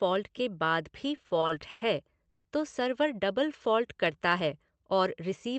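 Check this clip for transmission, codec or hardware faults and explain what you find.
Three network-related faults are audible in this speech, heard through a call codec whose bandwidth tops out around 8 kHz, which fits Opus at roughly 32 kbps.

From 1.15 to 1.83 s the speech drags and catches repeatedly: six short hitches, the longest about 110 ms, together adding about 220 ms, so roughly a third of that stretch is filler. These are repeated stalls (stutter). Packets kept arriving more slowly than they were played, so the jitter buffer emptied again and again, and each time the receiver extended the last sound until real audio resumed. Nothing is lost, only stretched.

At 2.29 s the sound hangs for about 150 ms as a held, fading continuation of the last sound, then resumes just before "तो सर्वर". This is a call audio freeze, likely caused by a burst of packets being held up in transit long enough to drain the jitter buffer. 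The receiver filled the wait by continuing the last sound, and when the packets caught up, playback carried on from where it stopped, leaving a gap of about 150 ms with nothing missing.

From 3.63 to 4.29 s the speech runs slow, at about 91% speed with the pitch unchanged, and vowels are drawn out. That is a jitter buffer slow-down. With its reserve running low or its target delay just raised, the buffer repeated individual pitch periods and bits of pauses many times over, adding about 65 ms to rebuild its cushion.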